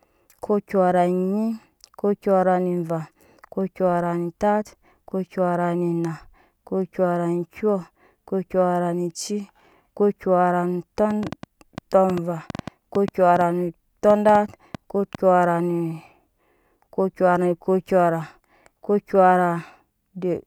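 From 11.1 to 15.2 s there's a train of clicks riding over the speech, with roughly twenty near-identical pops at about 5 per second, unevenly spaced and poking a few dB above the speech. The likely source is interference from nearby gear or a faulty connection or power supply.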